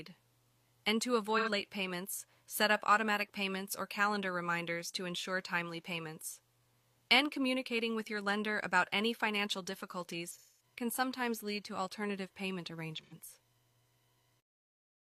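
AAC frame loss with concealment leaves smeared, phasey patches at 1.37 s, 10.31 s and 13.02 s, lasting about 85, 213 and 85 ms, filled in rather than dropping cleanly to silence.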